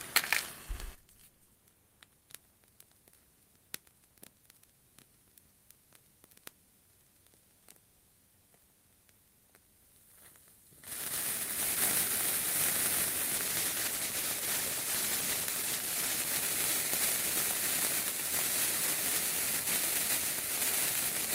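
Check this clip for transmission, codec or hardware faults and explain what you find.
There's one fault, a call bitrate drop. From 13.37 to 16.33 s the encoder starved for bits, so the audio goes coarse, watery and dull, which fits a fall from about 32 to 14 kbps before recovering.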